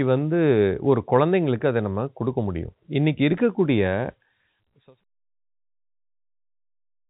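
Nothing stood out on listening; the speech sits in a telephone band with nothing above about 3.8 kHz, and the level eases smoothly down over the last stretch, finishing at about 5.04 s.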